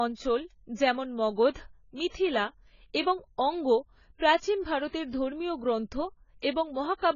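From start to finish the speech sounds dull and smeared, with a fizzy, warbling edge on sibilants. On a spectrogram the energy stops flat at 7 kHz. Heavy AAC compression is the likely cause, and the damage fits a low bitrate of around 16 kbps.

From 4.17 to 4.20 s, just after "এবং অঙ্গ", a 34 ms wash of hiss comes before an attack and softens it. This is pre-echo: the coder spread the noise from the loud onset across the quiet moment before it. The waveform shows a fuzzy smear leading into the transient, and the spectrogram shows a broadband haze just ahead of its edge.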